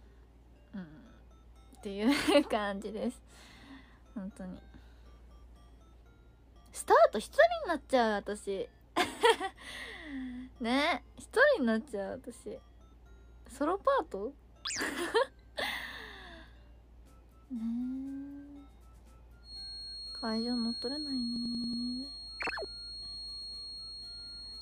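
From 19.41 s to the end at 24.61 s, the loudspeaker-to-microphone loop is likely sitting right at the edge of feedback, so a feedback whistle near 4.3 kHz hangs steadily behind the audio, roughly 10 dB below it and slowly swelling and fading in level. Then, at 21.36 s, the system froze while the audio hardware kept replaying its ring buffer. This system hang loop repeats one 92.9 ms slice exactly five times, a machine-gun stutter at 10.8 Hz, until 21.83 s. That loop length fits a 4096-sample buffer, and little or no audio appears to be lost.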